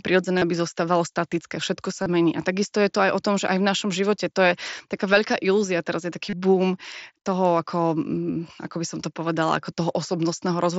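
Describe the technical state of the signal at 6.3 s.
Concealed Bluetooth headset packet loss at 6.30–6.33 s, just after "teraz je taký": about 30 ms of lost audio was filled by repeating recent waveform, leaving a brief buzzy tone.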